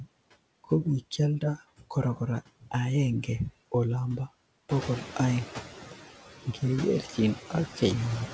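From start to finish, a noise suppressor is pulling down the frequency bands it judges to be steady background, cutting that noise by about 11 dB, frame by frame. These are noise suppressor artifacts. Because the cut changes with each frame, the noise dips away in the gaps and swells back under the speech. All of this sits within a band that stops at 8 kHz, consistent with a G.722 call codec at 64 kbps.

Near 4.5 s the room's background noise jumps by roughly 11 dB, to about 11 dB beneath the speech, and from 4.7 to 5.54 s the noise suppressor is catching up. Its noise estimate was still tuned to the quieter room, so at first it removes only about 7 dB and the louder noise comes through with less reduction. Over those 840 ms the estimate adjusts, and the noise sinks back down.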